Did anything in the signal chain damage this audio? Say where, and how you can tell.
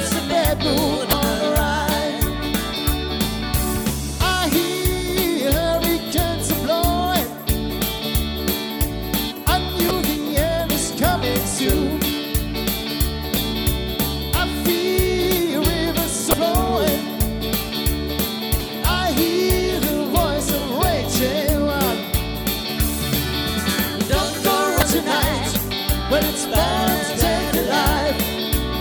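Yes, at the codec stage: damaged data in a compressed stream causes five short glitches at 1.10–1.13, 9.88–9.91, 16.30–16.34, 18.58–18.61 and 24.79–24.83 s. The decoder misreads corrupted frames until it resyncs. A spectrogram shows thin vertical smears, and the waveform shows abrupt discontinuities.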